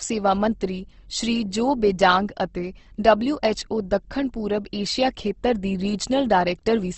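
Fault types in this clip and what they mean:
Opus compression: throughout the clip, the speech is dulled and grainy, with plainly audible codec damage and nothing above about 8.2 kHz. The likely cause is Opus in its music (CELT) mode at a rate that fits roughly 16 kbps. The encoder keeps each band's energy but, short of bits, fills the detail with folded copies of lower bands or with noise. Harmonics therefore turn rough rather than hollow, and the audio is capped at wideband.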